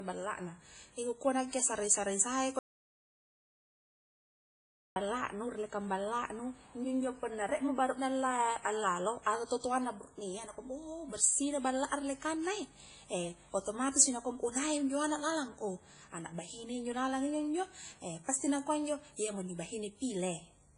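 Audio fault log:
throughout, WMA compression: the speech has a ringing, washy quality with hiss that swells and fades along with the voice, and nothing is present above about 10.1 kHz. This is likely a transform codec such as Windows Media Audio working hard at a low rate, which fits roughly 24 kbps. Long transform blocks smear quantisation noise across tens of milliseconds, and the encoder discards weak spectral lines and the whole upper band to save bits, so the damage is heavy.
2.59 to 4.96 s, audio dropout to silence: the speech cuts off abruptly and resumes mid-flow after 2.37 s of silence, with no room tone or noise floor left in the gap. The likely cause is the input signal being lost, through a disconnection, a failed link or a stray mute, while the recorder kept writing silence. Whatever was spoken during those 2.37 s is gone.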